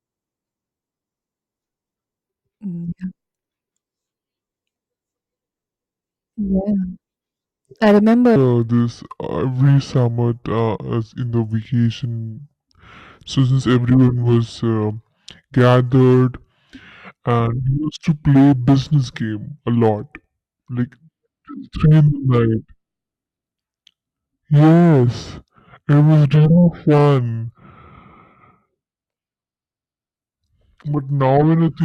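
From 8.36 s to the end of the clip, the speech suddenly drops deep and drags, slowed to 0.666 times its proper rate, with the pitch falling by roughly seven semitones, so the voice sounds heavy and sluggish where "of playing the those" follows. This is a section at the wrong speed: speed and pitch fall together at one switch point, likely because this part was played back against a mismatched clock.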